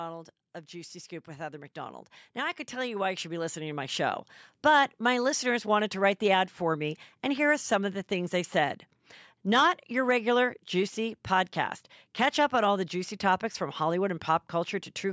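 A recording of speech in which, from 0.68 to 4.3 s, the voice and the background noise swell up together, climbing about 14 dB over several seconds before settling just ahead of "but my listeners wanted". This is automatic gain rising: the call's automatic gain control judged the input too quiet and raised its gain gradually, so everything it passes, room noise included, gets louder. The call microphone processing, whose band stops at 8 kHz, is working normally.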